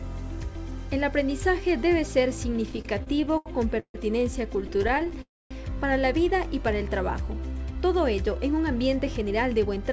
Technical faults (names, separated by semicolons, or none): repeated stalls (stutter); call audio freeze; jitter buffer speed-up